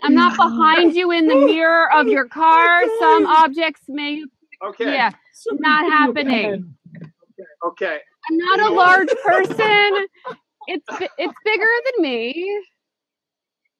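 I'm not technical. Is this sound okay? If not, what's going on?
No. At 6.30 s there is a block of digital silence: for about a third of a millisecond the sound drops to silence and jumps straight back without any fade. The gap is too brief to hear as a hole, so it comes across as a tick or dip.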